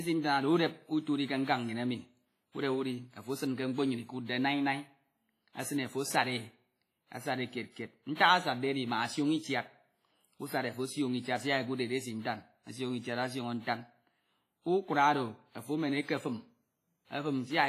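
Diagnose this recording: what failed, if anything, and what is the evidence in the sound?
The fault sits at the codec stage. Throughout the speech there is a ringing, washy texture and a hiss that swells and fades with the signal. Nothing is present above 15.5 kHz. Damage is heavy, which fits a low bitrate around 24 kbps. The likely cause is WMA compression. Its long transform blocks spread quantisation noise over tens of milliseconds, and weak spectral lines are zeroed. That explains the smeared, watery tone.

Pre-echo appears twice. The first is at 4.26 to 4.29 s, just after "esin ke mkpo nnyin". A short hiss spreads about 31 ms ahead of an attack. The second is at 8.15 to 8.19 s, with about 44 ms of spread. In both places the onset sounds soft rather than crisp. The mechanism is block-wide noise. Quantisation noise sized for the loud attack is spread evenly across the block, so it also fills the quiet moment before it.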